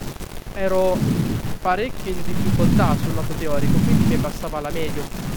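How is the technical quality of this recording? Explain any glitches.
No technical glitches are audible anywhere in this recording.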